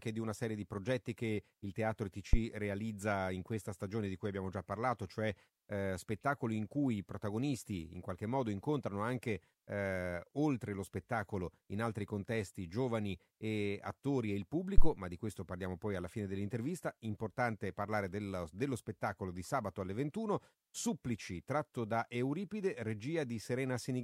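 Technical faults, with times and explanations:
2.33–2.40 s, phantom power thump: a deep thump peaking at about -14 dBFS after "progetti che il teatro", decaying in 14 ms. A supply step jolted the input's coupling capacitors.
14.78–14.89 s, phantom power thump: a stronger thump, about -11 dBFS, after "e attori e il", dying away over 26 ms. Again, switching the supply shocked the coupling capacitors.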